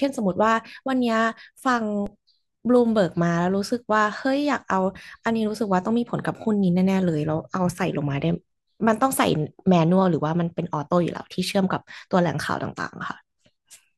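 At 2.06 s a DC step shifts the waveform's zero line by about -26 dBFS, decaying through a 20 Hz high-pass, giving a brief low thump beneath unchanged speech.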